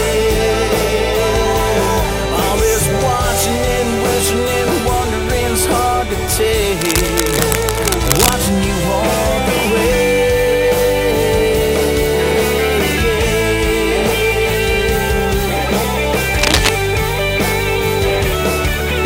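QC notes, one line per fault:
6.81–8.34 s and 16.38–16.70 s, cable scratch noise. Dense, uneven bursts of scratchy rustle sit over the sound. The first runs a little below it, the second about as loud. Likely a worn cable or connector being moved, its contact resistance jumping rapidly.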